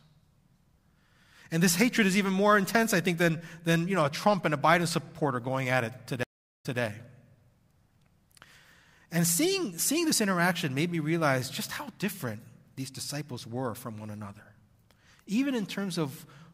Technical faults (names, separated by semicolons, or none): stream reconnect